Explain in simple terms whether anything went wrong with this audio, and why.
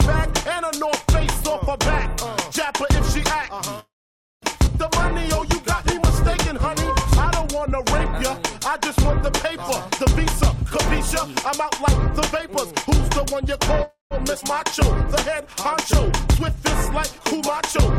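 Several network-delivery faults are audible.

Call audio freeze at 3.79–4.45 s and 13.83–14.14 s: the sound stalls, trails off into a fading buzz or hiss, then goes quiet for about 0.54 s and 0.15 s. It resumes where it stopped, so nothing is lost. The likely cause is held-up packets draining the jitter buffer.

Skip ahead at 4.66–4.70 s and 14.41–14.45 s: playback jumps forward with almost no gap. About 0.4 s of audio is missing at the first jump and about 0.2 s at the second. The sound on either side is joined almost directly.

Jitter buffer slow-down at 5.02–9.70 s and 14.64–17.39 s: the receiver repeats tiny pieces to build a reserve. This stretches the audio by 67 ms (99% speed) and 74 ms (97% speed). Pitch stays the same while sounds are slightly drawn out.

Jitter buffer speed-up at 11.50–13.35 s: the buffer held too much audio, so the receiver trimmed out tiny pieces, roughly 70 ms in total. 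Playback runs at 104% speed with unchanged pitch.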